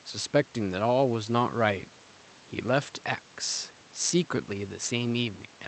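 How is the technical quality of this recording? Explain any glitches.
No glitches: the speech arrives over the call path with its usual band limit near 8 kHz, and the room noise stays about 27 dB below it.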